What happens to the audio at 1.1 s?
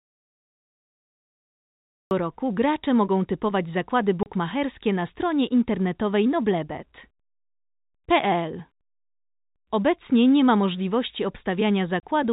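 At 1.1 s the clip is in an audio dropout to silence, already under way when the recording begins and lasting until 2.11 s. The input was likely lost, for instance through a disconnected device or a stray mute, while the recorder kept writing silence. The result is silence with no room tone. On a waveform this is a flat line; on a spectrogram it is a completely black band across all frequencies until the sound starts abruptly at 2.11 s.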